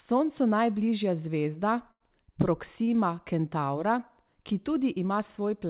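From 1.91 to 2.03 s a burst of packet loss leaves about 90 ms missing; the receiver stretches the last sound and fades it out, visible as smeared, decaying spectrogram bands before a jump. At 2.84 to 2.90 s, short concealed packet loss patches a 30 ms hole with a brief smeared wobble, a blurred sliver on the spectrogram below the steady 4 kHz ceiling of the call path.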